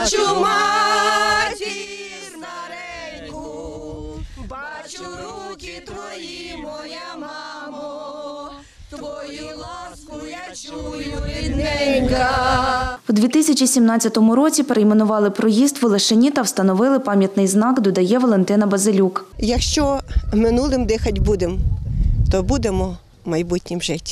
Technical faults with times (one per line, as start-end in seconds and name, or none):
1.40-1.90 zipper noise